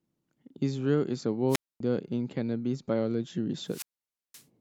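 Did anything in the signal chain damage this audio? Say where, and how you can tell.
Yes. At 1.48 to 1.80 s and 3.64 to 4.45 s the speech is swallowed by a short burst of hiss, then near silence lasting 0.25 s and 0.52 s respectively. This is wireless microphone squelch dropout: the radio link faded and the receiver's squelch muted its output.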